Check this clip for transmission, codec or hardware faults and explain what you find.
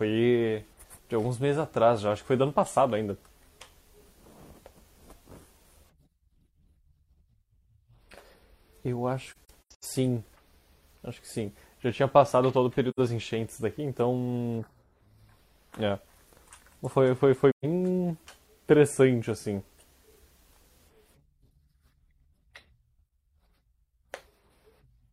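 AAC frame loss with muting occurs three times in this speech. Lost frames were zeroed by the decoder, and the overlapping windows fade each gap in and out, leaving soft-edged silences: 9.31 to 9.85 s (scattered dropouts, the longest about a tenth of a second), 12.89 to 12.99 s, and 17.51 to 17.65 s.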